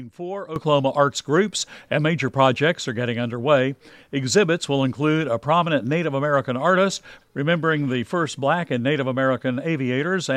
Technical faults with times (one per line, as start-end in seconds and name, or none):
0.56-10.36 sudden gain jump